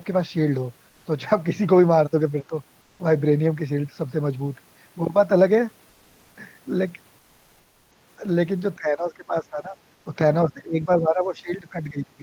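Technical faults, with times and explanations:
2.43–2.52 s, 8.77–9.78 s and 10.48–12.23 s, speech suppressed in double talk: the echo canceller likely mistook simultaneous far-end talk for its own echo and attenuated everything. Speech dips by about 15 dB in the first two spans and about 20 dB in the last, which runs to the end.
2.83–2.99 s, 5.91–6.35 s and 7.19–7.91 s, comfort noise in place of the background: the sender likely stopped transmitting during pauses, consistent with Opus discontinuous transmission. For 160, 440 and 720 ms the real background, about 40 dB below the loudest sound, becomes smooth, featureless synthetic hiss within about 1 dB of the original level.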